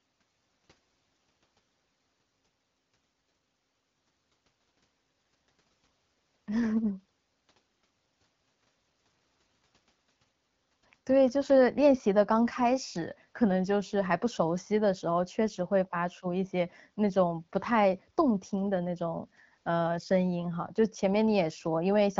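No technical faults can be heard in this speech recording, which carries the character of AMR wideband (HD Voice) coding at 12.65 kbit/s, with speech detail up to about 6.4 kHz and a noise-filled band above it up to 7 kHz.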